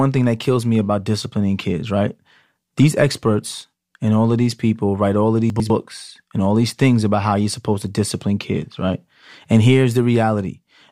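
At 5.5 s the speech briefly turns jumbled and settles again by 5.7 s. This is chunks out of order: one 100 ms block of audio arrived late and played one chunk after its proper place, so two neighbouring blocks swapped. No sound is lost, but the sequence is scrambled, and there are three abrupt joins where the swapped blocks meet their neighbours.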